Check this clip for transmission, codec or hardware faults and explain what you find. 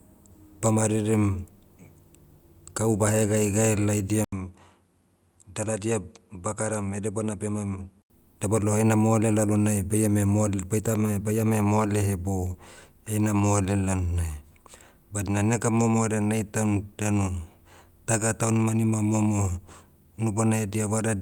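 One fault. From 4.24 to 8.10 s the input likely switched to a poorer device: the speech loses everything above 11.8 kHz, drops about 5 dB and gains new background noise about 45 dB down, with an 80 ms silence at the switch.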